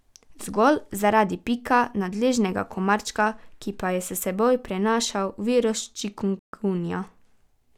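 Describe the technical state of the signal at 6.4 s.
At 6.39 s the speech drops to silence for 0.14 s, resuming at 6.53 s. This is a Bluetooth stall. Interference likely delayed the wireless packets, so the headphones' buffer emptied and playback halted until the resent data arrived.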